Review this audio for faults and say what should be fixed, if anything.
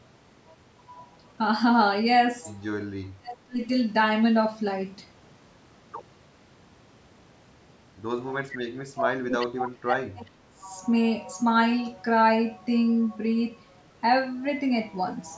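Speech suppressed in double talk occurs from 3.07 to 3.61 s and again from 8.44 to 10.7 s. The speech sinks, by roughly 30 dB in the first stretch and up to roughly 35 dB in the second, over about half a second and about two seconds in total. This is likely an echo canceller that heard both ends talking at once, could not tell the local talker from the loudspeaker echo, and attenuated everything. Prevention: tune the canceller's double-talk detection so it holds back less while both sides speak.

Echo leak appears from 8.5 to 8.57 s, inside the second suppressed stretch. A brief delayed copy of the speech returns about 378 ms late, sitting about 15 dB under the direct speech. The likely cause is a far-end loudspeaker whose echo canceller left residual echo in its microphone signal, which was then sent back down the line. Prevention: improve far-end echo cancellation, or have that side use a headset instead of a loudspeaker.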